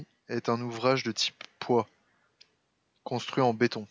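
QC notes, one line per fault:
No faults found; the speech has passed through call microphone processing, which trims the lowest bass and leaves nothing above 8 kHz, as expected for that path.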